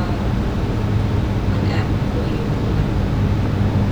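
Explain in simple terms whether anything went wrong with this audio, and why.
Something did go wrong: there's a loud pop at about 3.46 to 3.48 seconds, near the end. It's one sharp click, a bit louder than the speech, which keeps going right through it. That's likely a sudden electrical jolt, like a plug, switch or static discharge.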